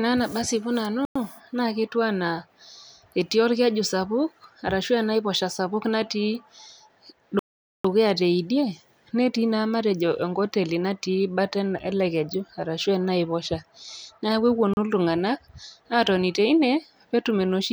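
The speech drops out three times, each a clean cut to silence before the speech carries on. The first gap runs from 1.05 to 1.16 s, about 104 ms. The longest runs from 7.39 to 7.85 s, 452 ms, just before "teidie netii". A brief one follows "neaku epuonu", from 14.74 to 14.77 s, 35 ms. These are Bluetooth stalls, likely from interference delaying packets until the headphone buffer emptied and playback waited for resends.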